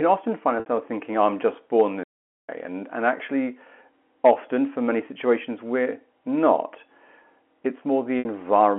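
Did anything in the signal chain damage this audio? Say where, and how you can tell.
Yes. Packet loss with pitch repetition appears at the network stage, at 0.60 to 0.66 s, between "often find" and "thinking oh I'm just", and again at 8.19 to 8.25 s. Each gap is about 60 ms, which fits two lost packets. The receiver bridged each one by repeating the last pitch period, so the sound briefly holds with a buzzy quality.

A playback stall occurs from 2.03 to 2.49 s, right after "oh I'm just born". The output goes silent for about 450 ms in mid-flow and then resumes. The likely cause is the player running out of buffered data or its thread being blocked.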